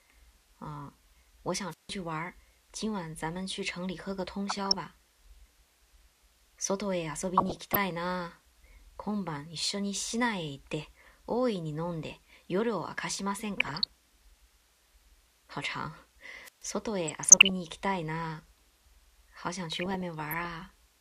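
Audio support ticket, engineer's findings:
Wireless microphone squelch dropout, 1.70–1.91 s and 16.44–16.64 s: hiss rise, then mutes of about 158 ms and 134 ms. RF fade at the receiver trips squelch until carrier recovers.

DAB burbling, 4.49–4.74 s, 7.37–7.76 s, 13.58–13.88 s, 17.07–17.50 s: short noise blips in sub-bands over the audio. Weak reception, residual bit errors (under 1 %) corrupting MP2 sub-band data frame by frame.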